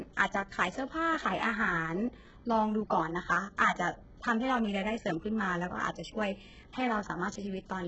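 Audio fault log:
Throughout: HE-AAC compression. The speech is heavily mangled, and nothing comes through above 8 kHz, yet the upper range still has a synthetic sheen. That's likely HE-AAC working at a very low rate, something like 8 kbps. It codes only the lower band properly and fakes the treble by copying lower bands upward under a rough envelope. The harmonics don't line up across the join, so the s sounds come out gritty, metallic and a bit lispy.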